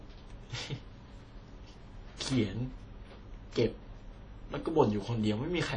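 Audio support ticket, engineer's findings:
Throughout the speech: plainly audible ringing and washy smearing around consonants, plus hiss that breathes with the speech level. Nothing above 9.9 kHz. Likely WMA compression at the encoder. Long transform blocks spread quantisation noise over tens of milliseconds, and weak components are zeroed; the damage fits a low bitrate near 32 kbps. Spectrogram: hard ceiling at 9.9 kHz, blurred onsets, holes and speckle in the upper bands.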